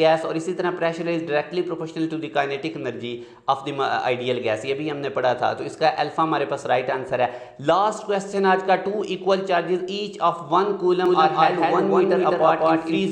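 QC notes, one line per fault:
11.06 s to end: doubled audio track. A second full-band copy cuts in abruptly, trailing by about a fifth of a second at roughly equal level, likely from a slower capture path. Unlike echo or reverb, it has no decay or room colour.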